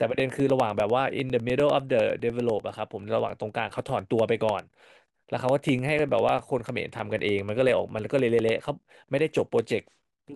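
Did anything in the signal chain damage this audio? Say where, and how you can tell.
Yes: regular ticks every 0.1 s from 0.1 to 10.29 s, each roughly 2 ms of silence, are periodic USB or driver dropouts from a repeatedly blocked driver.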